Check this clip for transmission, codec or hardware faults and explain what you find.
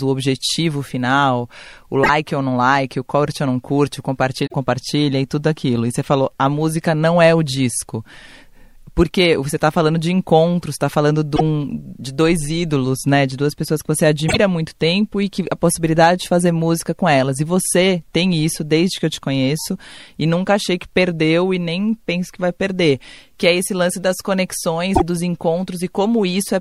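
The clip has one fault type. Damaged data in a compressed stream, at 2.00, 4.46, 11.33, 14.25 and 24.91 s, each about 0.1 s: corrupted frames make the decoder lose sync, producing brief disruptions.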